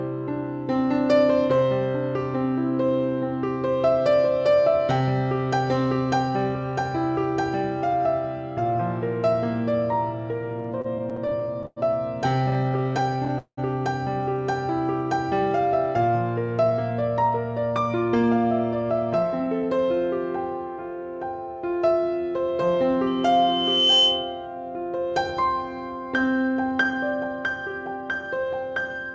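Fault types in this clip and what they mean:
Repeated stalls (stutter): from 10.50 to 11.78 s and 12.50 to 13.59 s, packets arrived late and the jitter buffer kept running dry, so the receiver stretched the last sound across each gap, the longest 189 ms. The audio drags and stutters, with roughly a fifth concealed.
Jitter buffer speed-up: from 16.63 to 19.79 s the buffer was holding more audio than its target, so the receiver trimmed short pitch-period pieces again and again, removing around 300 ms. The sound runs at 108% speed without a change in pitch, which makes it hurried.
Loudspeaker feedback squeal: from 23.07 to 24.47 s a 3 kHz tone grows over about a second into a squeal about 5 dB above the signal. A microphone is picking up its own loudspeaker, and at that frequency the loop gain exceeds one.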